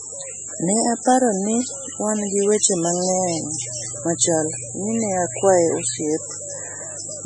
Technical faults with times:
0.00-7.25 MP3 compression
3.19-6.04 mains hum

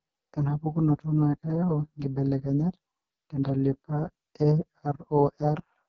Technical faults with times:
0.00-5.89 AMR wideband (HD Voice) codec

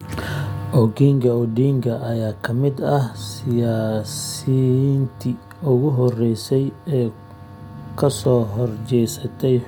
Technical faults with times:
none

